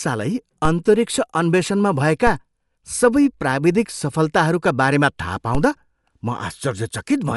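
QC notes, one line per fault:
throughout: Dolby Digital compression. The speech has a band-limited, dulled character with nothing above 11.5 kHz, and plainly audible codec damage: a rough, fluttering grain clinging to voiced tones. The likely cause is AC-3 style coding at a low rate, around 64 kbps, where the encoder narrows the bandwidth and starves many frequency lines of mantissa bits, so the decoder substitutes dither noise in their place and the detail turns coarse.
0.65, 2.27, 5.55: DC step. At each of these three moments the waveform's zero line jumps abruptly to a new offset, as a converter recalibrating or an offset input being switched in would cause. The sudden shift is heard as a low thump or click while the speech carries on unaffected. Each offset then drains away gradually, its decay matching a 5 Hz high-pass, so no lasting bias remains before the next step.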